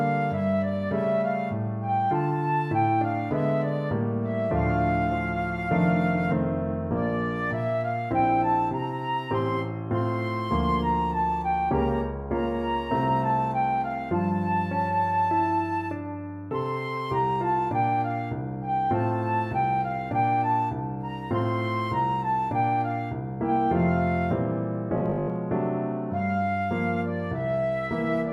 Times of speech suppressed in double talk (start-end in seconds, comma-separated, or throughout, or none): none